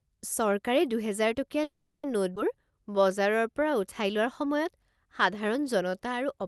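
At 1.63 s the incoming packets most likely stalled and the jitter buffer ran dry, a call audio freeze. The receiver stretches the last bit of speech into a fading buzz or hiss that trails into about 220 ms of silence, and the speech resumes at 2.05 s. About 400 ms has been inserted, nothing is lost, and the rest of the speech now plays that much later.

Between 2.35 and 2.38 s the receiver jumps ahead: roughly a tenth of a second of speech is thrown away, which fits the buffer shedding the backlog the stall built up. This skip ahead leaves only a 10 ms join, so the two sides of the cut butt together almost directly and a fragment of sound is simply gone.

From 2.67 to 3.71 s the jitter buffer rebuilds its reserve by repeating single pitch periods over and over. This jitter buffer slow-down adds 105 ms, so the speech runs at about 90% speed without any drop in pitch. Syllables sound drawn out. 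Throughout, the audio carries the character of a 40 kbps Opus call path, with nothing above about 12 kHz.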